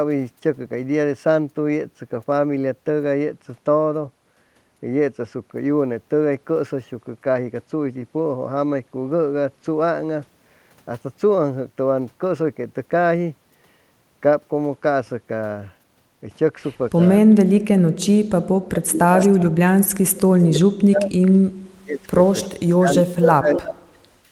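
From 16.97 to 17.11 s there is a faint echo leak: a copy of the speech returns 314 ms late and about 30 dB down. It is likely leaking from a loudspeaker whose echo canceller let part of the signal through.

From 17.21 s to the end, speech is suppressed in double talk. The talker's level dips by as much as about 35 dB, likely because the canceller turned down both voices at once. On the waveform this shows as sudden hollows and gaps, and on the spectrogram the upper bands thin out.

Further echo leaks fall at 19.19 to 19.42 s (322 ms delay, about 15 dB down), 20.39 to 20.44 s (325 ms, about 40 dB down) and 22.24 s to the end (336 ms, about 15 dB down). They appear as smeared, fainter repeats of earlier harmonic patterns, shifted a third of a second later.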